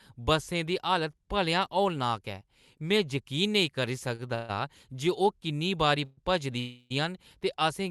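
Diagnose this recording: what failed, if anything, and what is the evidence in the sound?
Short stall from a late packet at 4.15 s: a network jitter-buffer underrun held the last sound for 35 ms. It shows as a smeared, repeated spectral frame, then speech resumes.

Call audio freeze at 4.35–4.51 s, 6.05–6.19 s and 6.59–6.92 s: buzzy, fading holds of about 140, 130 and 310 ms, likely from network-delayed packets. They appear as flat, blurred spectral bands and a decaying waveform envelope.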